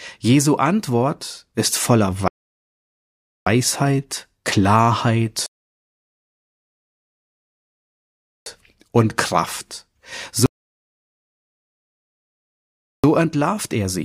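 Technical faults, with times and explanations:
2.28–3.47 s, 5.46–8.46 s and 10.46–13.04 s, rebuffering stall: playback halts into flat silence for about 1.2, 3.0 and 2.6 s while the player waits for data, then resumes exactly where it stopped. The waveform shows flat gaps, and the spectrogram shows blank columns.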